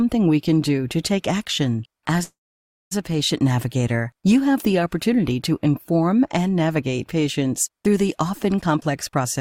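The audio has two network-related faults. From 2.23 to 2.93 s a call audio freeze occurs: the last sound is briefly extended as a fading buzz or hiss, then about 580 ms of silence follows before playback resumes where it stopped, adding roughly 680 ms of delay with nothing lost. The likely cause is delayed packets leaving the jitter buffer empty. From 8.66 s to the end at 9.41 s there is a jitter buffer speed-up: the audio plays at about 126% speed with unchanged pitch and sounds hurried, as the receiver trims short pitch-period slices totalling around a fifth of a second to pull the accumulated delay back down.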